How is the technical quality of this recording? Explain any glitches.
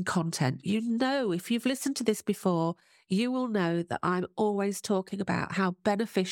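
The signal holds steady throughout the recording, with nothing in it that registers as a technical glitch.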